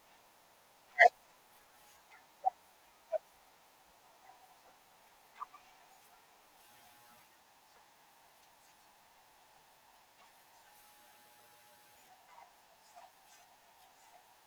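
Nothing is technically wrong with this speech recording.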